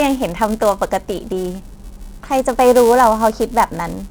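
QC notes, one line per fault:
Throughout: filter restarted on every block. Each block starts from silence, adding a small transient. The result is a 375 Hz buzz tracking the speech level, consistent with 128-sample blocks.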